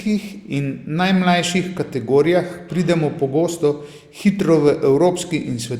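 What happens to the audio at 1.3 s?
Nothing goes wrong at 1.3 s; the speech continues cleanly through that moment with no dropout, click or distortion.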